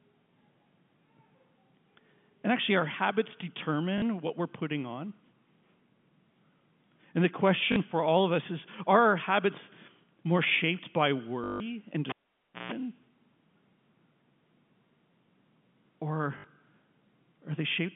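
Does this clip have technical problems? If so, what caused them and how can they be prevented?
Yes. There are two kinds of fault, heard over a telephone-band G.711 line that passes nothing above about 3.5 kHz.

Packet loss with last packet repeated: dropouts at 3.98 to 4.02 s (40 ms, just before "what we're putting on"), 7.72 to 7.76 s (40 ms, before "for all of us"), 11.44 to 11.6 s (160 ms, after "habits more shaped by") and 16.38 to 16.44 s (60 ms). The receiver filled each gap by replaying the last packet it had. The repeats don't line up with the pitch period. The long 11.44 s run becomes a robotic 50 Hz buzz, which fits 20 ms packets. Prevention: a properly sized jitter buffer with real packet-loss concealment, plus network QoS, would smooth these gaps.

Cable pulled and plugged in: from 12.09 to 12.72 s, a live cable was pulled out and pushed back in. A pop opens a near-silent gap of about 0.57 s. 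About 0.15 s of 60 Hz mains buzz follows while only the plug tip makes contact, and a second pop comes as the sound returns. Prevention: mute the channel before replugging and use secure, locking connectors.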